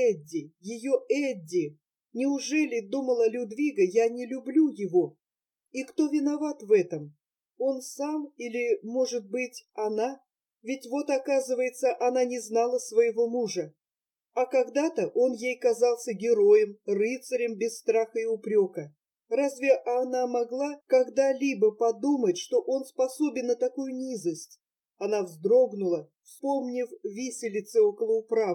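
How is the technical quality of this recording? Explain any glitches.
The technical quality is affected by channel delay (comb filtering), which runs through the whole recording. One channel arrives a fraction of a millisecond late, roughly 0.4 ms, and once the two are folded to mono, whatever they share cancels at evenly spaced points. The first notch sits around 1.5 kHz, with more repeating up the spectrum, so the sound comes across hollow and a bit phasey, missing some presence in the upper mids.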